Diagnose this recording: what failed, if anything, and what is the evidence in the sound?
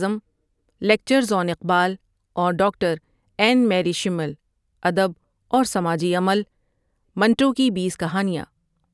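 Nothing in this speech recording points to a failure at any stage of the chain, so there's nothing here that needs chasing down.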